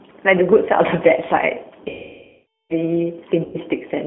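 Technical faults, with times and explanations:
Throughout: G.729 codec. The speech sounds slightly rough and synthetic, confined to a narrow line band of about 200 Hz to 3.5 kHz. This fits an 8 kbit/s G.729A codec, which rebuilds each 10 ms frame from a vocal tract filter, a pitch predictor and a few pulses.
1.89–2.74 s: VoIP packet loss concealed by the speech codec. About 810 ms of audio is missing. The decoder kept extrapolating its last pitch and filter at falling gain, so the sound smears into a buzzy tone or coloured noise that fades. Because each frame builds on the previous one, the speech stays weak and distorted briefly after it resumes.
3.45–3.57 s: VoIP packet loss concealed by the speech codec. This shorter gap of about 90 ms produces a brief smear and a dip in level as the decoder repeats its last pitch and filter with decreasing gain, followed by a short distorted recovery.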